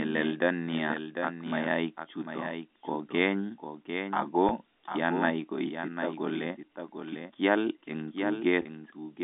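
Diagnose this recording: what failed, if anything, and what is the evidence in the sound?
A doubled audio track runs through the whole speech. A second full-band copy trails roughly 0.7 s behind, about 10 dB quieter, with no decay or room colour. The stage is likely call processing or routing, where a slower second capture path gets mixed back in.

Packet loss with pitch repetition sits at the network stage. At 4.49–4.51 s, just before "kianai koitita kole", 20 ms goes missing. At 8.62–8.65 s, 30 ms goes missing. Each gap is a brief, slightly buzzy held tone. The receiver looped the last pitch period, which fits two and three lost packets. The telephone band of the G.711 line is still audible underneath.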